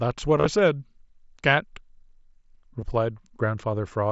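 Around 0.38 to 0.46 s there's concealed Bluetooth headset packet loss: dropped packets get patched by repeating recent waveform, so a run of nearly 40 ms buzzes briefly before warbling back. At 2.81 s a shorter dropout of 15 ms follows.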